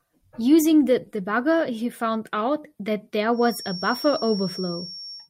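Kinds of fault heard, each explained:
Feedback whistle: a loudspeaker-to-microphone loop likely sitting at the edge of feedback leaves a thin, single-pitch 5.5 kHz whistle, swelling and fading slowly, well below the speech from 3.3 s onward.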